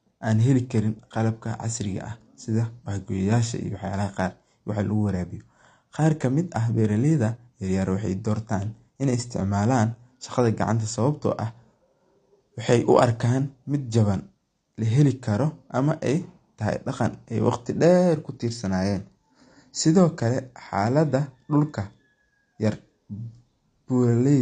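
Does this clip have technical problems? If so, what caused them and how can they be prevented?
Yes. Throughout the speech, nothing is present above 9 kHz, and the remaining sound is dull and smeared, with a warbling, fizzy texture on sibilants and sustained sounds. This is likely AAC compression (AAC-LC) at a low rate, which fits roughly 32 kbps: the encoder lowers its cut-off and starves or noise-fills bands. A simple low-pass filter would sound dull but clean, without the swirling artefacts. Encoding at a higher bitrate prevents it.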